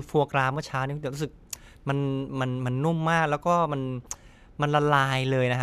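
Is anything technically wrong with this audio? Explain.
No, nothing technically wrong turns up in this speech recording; it all sounds just as it should.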